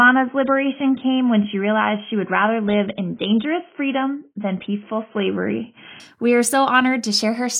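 Speech opens dull, with nothing above 3.8 kHz, until 6.0 s. There quality jumps cleanly, with no gap: an adaptive stream starting at a low bitrate, roughly 16 kbit/s AAC, then stepping up.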